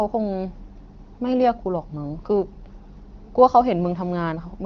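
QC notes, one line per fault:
No faults found.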